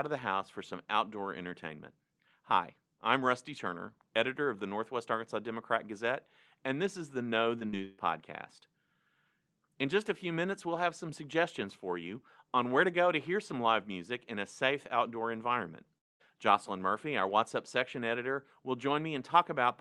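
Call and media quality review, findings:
Short concealed packet loss, 7.59 s and 7.71 s: two brief smears, about 20 ms each, where the decoder's concealment extended the preceding sound and then cross-faded back. The sound is continuous, with no silent gap, which separates it from a dropout. Probable component: jitter buffer/PLC on the receive side.

Burst of packet loss, 7.85–8.00 s: held, decaying continuation of the last sound for roughly 0.14 s, then resumption further on with that stretch missing. It sits right after the two short losses. It is longer than those and has an audible fade, but there is no silent stretch, which separates it from the dropout. Component: network path, concealed by the Opus decoder.

Long network dropout, 15.98–16.22 s, just after "a safe outdoor environment": concealment fades out almost at once, leaving roughly 0.2 s of silence before audio returns further on, with the lost part gone. 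The silent hole, not a held buzz, is what marks it as longer than the burst. The likely cause is a momentary stall in packet arrival rather than a local audio fault. Opus path audible as a high-frequency ceiling near 12 kHz, consistent with a moderate call bitrate.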